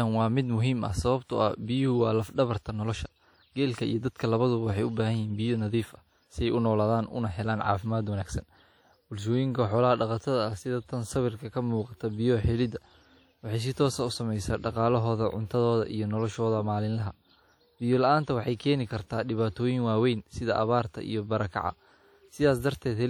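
Throughout the speech, WMA compression damage is plainly audible, likely from a low-bitrate encode around 48 kbps. Quantisation noise smears across tens of milliseconds, giving ringing, washy edges and a hiss that swells and fades with the speech, unlike a steady noise floor. Nothing sounds above 19.9 kHz.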